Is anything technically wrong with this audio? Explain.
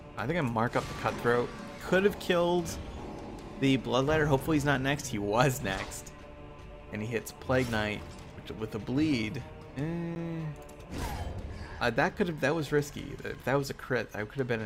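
Yes, there is one fault. At 10.15 s a 10 ms block of digital silence drops in: those samples became zeros, so the sound stops abruptly and resumes with no fade. It is heard as a tick. On the waveform it shows as a near-flat line; on a spectrogram, as a brief blank gap.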